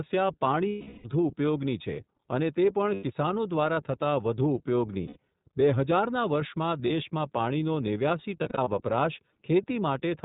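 Right from the start the whole clip runs through the iLBC codec. It's narrowband, so nothing above 4 kHz gets through, and the speech comes out clear but plainly rough and a bit synthetic. Each 30 ms frame's excitation is coded on its own, and the overall quality fits iLBC's 13.33 kbps mode.

On top of that there are lost iLBC frames. The first and longest hits from 0.69 to 1.08 s, about 360 ms missing. The decoder keeps repeating the last pitch cycle mixed with noise and lets it fade, so you get a held, buzzy-breathy vowel instead of real speech. Shorter 90 ms gaps follow at 2.94–3.04 s, just before "કિસાનો દ્વારા થતા વઘુ", and at 5.07–5.17 s, right before "બે હજાર ના વર્ષમાં". A brief 30 ms blip lands at 6.87–6.91 s. Finally, just after "પાણીનો નેવ્યાસી", from 8.43 to 8.68 s, about 120 ms goes missing in frame-sized pieces spread across roughly a quarter second. Since iLBC frames stand alone, the voice snaps back almost immediately after each gap.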